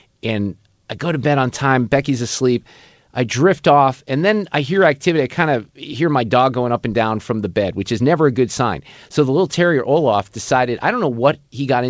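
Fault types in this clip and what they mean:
No faults in this clip.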